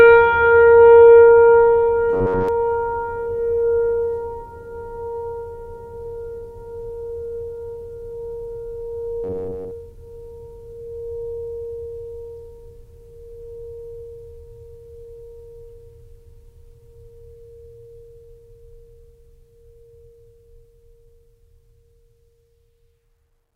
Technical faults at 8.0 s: none

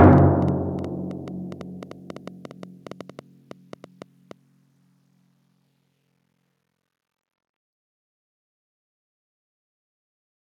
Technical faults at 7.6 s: none

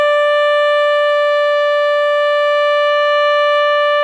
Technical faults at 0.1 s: none

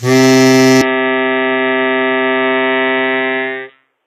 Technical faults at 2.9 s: HE-AAC compression; input switched to a poorer device

